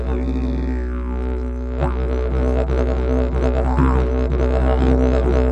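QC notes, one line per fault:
No technical faults heard anywhere in the clip.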